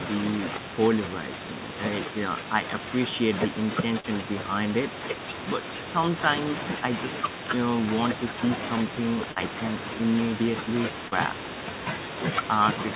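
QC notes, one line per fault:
4.00–4.07 s, 9.32–9.39 s, 11.08–11.15 s: short concealed packet loss. About 40 ms went missing each time, and the receiver filled the gap by extending the preceding sound. This causes a brief smear or wobble. On a spectrogram, each event shows a smoothed, repeated patch inside the band that ends at 4 kHz. On the waveform, it appears as a copied-looking stretch that then blends back into the real audio.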